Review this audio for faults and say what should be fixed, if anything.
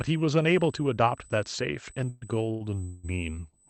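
A thin, steady whistle at 8 kHz sits under the speech for the whole recording, roughly 25 dB below it. That fixed pitch is the signature of USB whine: the bus draws current in 125 microsecond microframes, and that 8 kHz pulsing leaks into the audio through shared power or ground. It survives the call path, whose Opus coding passes content up to 8 kHz. Powering the interface separately or adding a ground-loop isolator should prevent it.

Twice the speech turns into a fading buzz and then resumes where it stopped, from 2.09 to 2.35 s and from 2.84 to 3.05 s. This is a call audio freeze. Its likely cause is delayed packets draining the jitter buffer, so the receiver extends the last sound while it waits. The fill lasts about 122 ms the first time and 190 ms the second. No speech is lost, but each wait pushes the rest of the audio later by that amount. A larger adaptive jitter buffer or a steadier network route would prevent this.

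From 2.51 to 2.62 s, a sound is held too long with a slight buzz before the speech carries on. This is a short stall from a late packet: one packet missed its playout time, the jitter buffer ran dry, and the receiver stretched the previous audio by about 99 ms until the packet arrived. Nothing is missing, but the timing slips. Reducing network jitter or allowing the buffer more headroom would prevent it.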